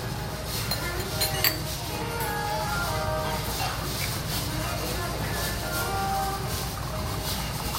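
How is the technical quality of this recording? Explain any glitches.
Nothing glitchy turns up here; the recording of sounds comes across as steady and intact, with no technical faults to point out anywhere along the way.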